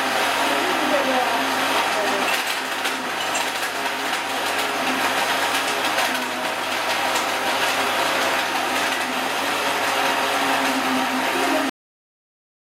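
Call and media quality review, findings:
Cut-off end at 11.70 s: final buffers never written or played out, probable capture/file-finalisation stage. Sound stops mid-event with no decay, dropping straight to digital silence for the last 1.04 s rather than ending naturally.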